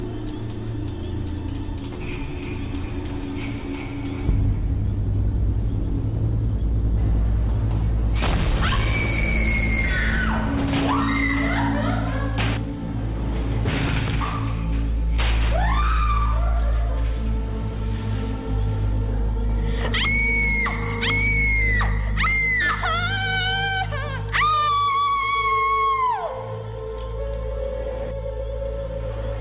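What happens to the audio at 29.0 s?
Nothing goes wrong at 29.0 s; the audio carries on intact through that moment with no audible fault.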